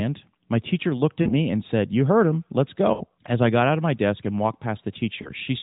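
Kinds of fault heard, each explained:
Lost AMR speech frames: brief smeared, warbling dips where the sound holds its last shape and sags in level, at 1.22 to 1.32 s between "teacher looked" and "and said", at 2.94 to 3.02 s just after "heard him let's", and at 5.22 to 5.29 s. Corrupted radio frames were discarded and the decoder stretched the last good pitch and vocal-tract settings with falling gain. Gaps of roughly 40, 60 and 20 ms fit runs of whole 20 ms frames, heard through the narrowband phone-call band.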